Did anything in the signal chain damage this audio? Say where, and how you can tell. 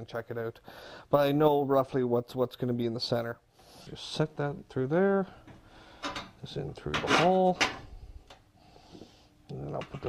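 No, nothing in the signal chain can be heard to have damaged this audio, and the signal sounds continuous and intact at every point.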